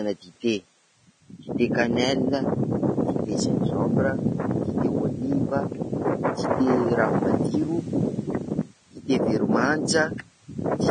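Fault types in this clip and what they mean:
Vorbis compression: likely low-bitrate Vorbis coding, nothing above 9.7 kHz, with treble quantised into grainy noise, roughened tones and blurred attacks throughout the speech.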